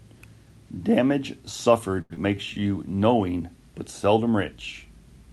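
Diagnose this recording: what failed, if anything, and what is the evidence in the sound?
Short stall from a late packet, 2.01 to 2.12 s, at the network and jitter-buffer stage. A packet arrived 86 ms late, the buffer ran dry, and the receiver held the last sound across the gap before resuming where it stopped. Nothing is missing, but the sound hangs unnaturally long.

Short concealed packet loss, 2.14 to 2.19 s, also in the network and jitter-buffer path. About 60 ms of audio never reached the Opus decoder in time. The receiver filled 29 ms by extending the preceding sound, then blended back into real audio, heard as a brief smear. The buffer also dropped roughly 30 ms of delay.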